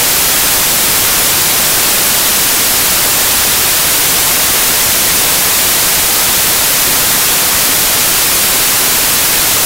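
The whole clip is filled with loud, harsh broadband noise: samples built from the wrong bytes, where misaligned or swapped byte order turns the rapidly changing low bits into each value's dominant part.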